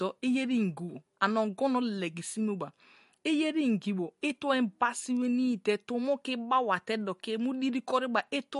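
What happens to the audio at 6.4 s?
At 6.4 s, as throughout, the speech carries likely MP3 compression, plausibly a low bitrate near 48 kbps. It sounds watery and swirly, with a spectrogram showing a hard ceiling at 11.2 kHz and flickering gaps below it.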